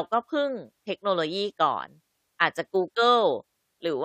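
No technical faults can be heard anywhere in the recording.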